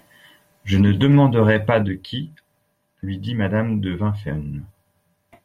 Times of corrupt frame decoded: 0.87, 3.27-3.29

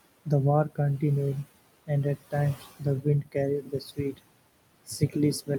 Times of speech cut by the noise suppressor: 2.55-2.82, 3.62-4.25

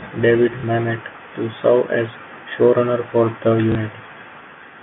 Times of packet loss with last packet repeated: 0.60-0.63, 3.72-3.75

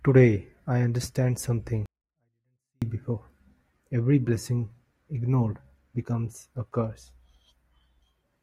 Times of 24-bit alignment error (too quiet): 1.86-2.82

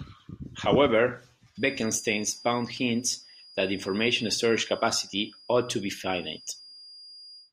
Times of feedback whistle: 1.51-7.52

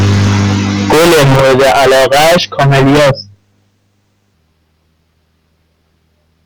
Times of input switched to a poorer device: none

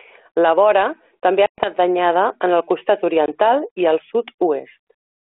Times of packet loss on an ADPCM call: 1.46-1.73, 3.26-3.29

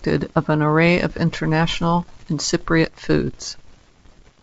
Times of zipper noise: none

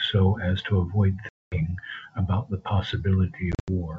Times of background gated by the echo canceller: none

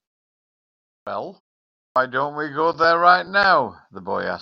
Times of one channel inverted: none

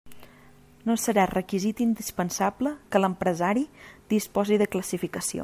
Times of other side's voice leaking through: none

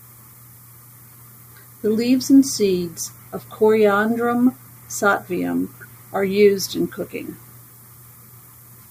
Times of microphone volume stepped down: none

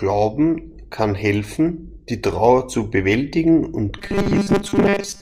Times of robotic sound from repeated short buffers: 3.98-5.21

